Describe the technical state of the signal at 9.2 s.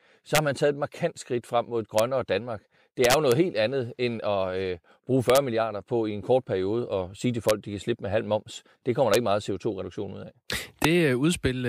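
Integer overflow at about 9.14 s, between "kommer der" and "ikke meget": a peak about 1 dB over full scale wraps to the opposite sign, heard as a sharp crack and seen as a full-range vertical flip with a broadband spectrogram streak.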